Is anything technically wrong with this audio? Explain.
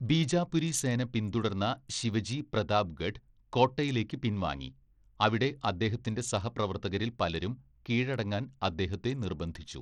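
Yes. Throughout the speech there is plainly audible damage, likely from Bluetooth SBC compression at a low bitrate, possibly around 80 kbps. Starved upper sub-bands make the treble flicker and drop out, with gritty noise and aliasing. Unlike a steady low-pass, the top end comes and goes.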